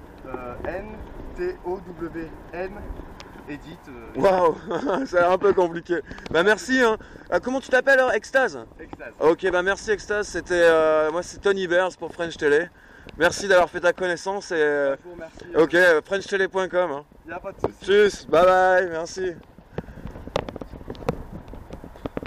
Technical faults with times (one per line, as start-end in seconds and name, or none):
none